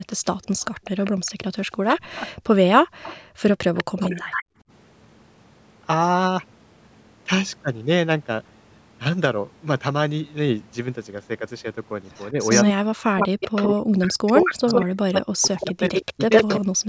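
From 0.11 s to 4.44 s, a delayed copy of the speech trails it by 195 ms at roughly 10 dB below it. This is likely an echo leak: audio played on a loudspeaker at the far end got past the echo canceller and was sent back.

At 1.83–2.46 s and again at 4.06–4.23 s, the talker dips, first by around 40 dB and then by about 15 dB. This is likely speech suppressed in double talk, with the canceller turning down both voices at once.

At 2.82–3.42 s and 4.5–4.66 s, the room sound drops out by about 40 dB and about 26 dB, then comes back. This is background gated by the echo canceller, which clamped the microphone while the loudspeaker was playing.

From 12.15 s to 16.6 s the echo leak returns, now at 109 ms delay and about as loud as the speech itself. From 12.31 s to the end, the speech is repeatedly pulled down, by up to around 40 dB and for roughly three seconds in total. This is likely double-talk suppression again.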